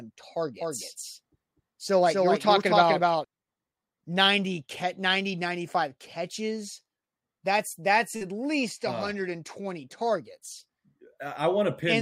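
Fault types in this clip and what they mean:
Doubled audio track: from 0.61 to 3.25 s the speech is heard twice, with a second, somewhat quieter, dry copy trailing roughly 300 ms behind and cutting in and out abruptly. This is likely the same signal captured again through a slower path.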